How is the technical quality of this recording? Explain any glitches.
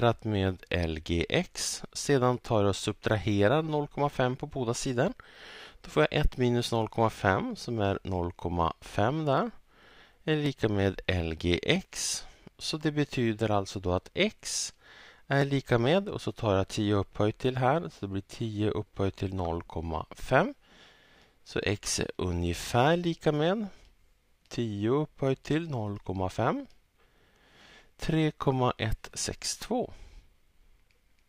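Four sharp clicks stand out, at 10.46, 11.76, 15.42 and 23.05 s. Each is most likely dropped samples: under a millisecond of the stream goes missing, so the waveform jumps to a later value, leaving a thin vertical line on the spectrogram.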